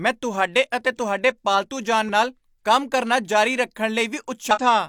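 Speech clip with two bursts of damaged data in a compressed stream, at 2.05 to 2.09 s and 4.51 to 4.58 s. Corrupted frames make the decoder misread them and lose sync, giving brief glitches where the sound breaks up.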